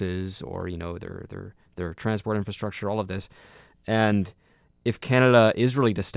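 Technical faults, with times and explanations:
No technical faults are audible anywhere in the speech.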